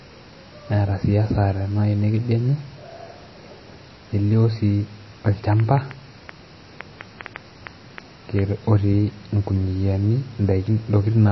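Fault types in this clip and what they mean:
MP3 compression: The speech has no content above 5.8 kHz and plainly audible watery, swirling artefacts, with smeared consonant onsets. This likely comes from low-bitrate MP3 encoding, around 24 kbps, where the encoder discards treble and switches weak frequency lines on and off between frames.
Train of clicks: From 5.53 s to 8.40 s, around fifteen similar clicks tick over the speech and the gaps at about 4.2 per second, irregularly spaced and peaking a few dB above the speech. The likely cause is electrical interference or a faulty connection or power supply.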